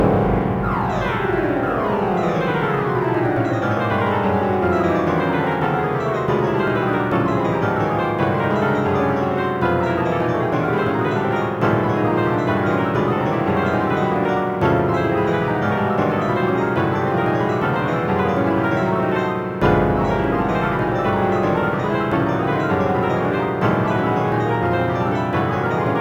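A fine hiss and grainy roughness ride on these everyday sounds for the whole clip, swelling on loud, bright moments and disappearing in the quiet gaps. That is sample clock jitter: timing errors of roughly two microseconds put an error about 40 dB below the signal, worst where the waveform moves fastest.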